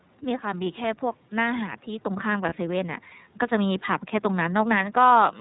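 A speech recording carried through the iLBC codec, with a single dropped-frame event partway in. Throughout, the band stops at 4 kHz, giving a muffled telephone quality, and voiced sounds have a rough, slightly synthetic edge. That fits iLBC's 30 ms frame mode at about 13.3 kbps. The coder rebuilds each frame's excitation independently. The room noise sits about 38 dB under the voice. From 2.49 to 2.53 s come lost iLBC frames, consistent with one missing 30 ms frame. The decoder bridges the hole by repeating the last pitch cycle blended with noise, so it sounds like a brief held, faintly buzzy vowel instead of silence or a click. Because iLBC frames don't depend on their predecessors, the voice snaps back to normal immediately afterward, with none of the lingering garble that follows a loss in codecs that carry state between frames.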